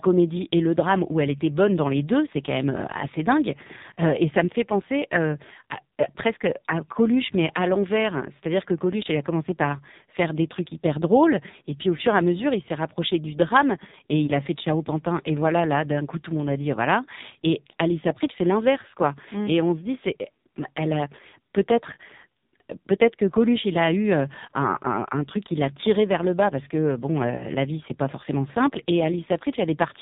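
The whole clip has been through the AMR narrowband mobile codec, and it's heavily damaged. Nothing above 4 kHz survives, and the speech has that buzzy, synthetic, vocal-tract-model quality, which fits one of AMR-NB's lowest modes, around 5.9 kbps.

Then there are two spots of lost AMR speech frames. From 14.26 to 14.32 s, between "rapproché du drame et" and "a fait de", there's a brief dip and warble. That fits a single dropped 20 ms frame that the decoder patched by repeating its last good settings at lower gain. From 27.36 to 27.49 s, after "bas parce que bon" and before "la vie c'est pas", the sound smears and sags for longer, which points to roughly two frames concealed back to back before the speech recovers.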